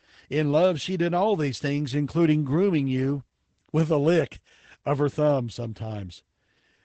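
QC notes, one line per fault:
Throughout: Opus voice compression. Nothing above 8.7 kHz, so speech sounds muffled and hoarse. Coarse excitation coding points to a low rate, around 12 kbps.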